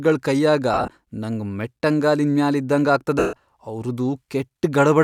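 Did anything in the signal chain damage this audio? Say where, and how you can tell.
Yes. The damage is at the codec and radio link: lost LE Audio frames, heard at 0.74 to 0.88 s, just before "ನಂಗ್ ಮೆಟ್ಟಂಗಾಲಿನ್ ಮ್ಯಾಲ್ ಇದ್ದಂಗ", as short scattered dropouts totalling 90 ms. At 3.19 to 3.33 s, right after that phrase, there is one 140 ms gap. The LC3 decoder refills each gap with the last spectrum under random signs, so speech smears into noise and fades.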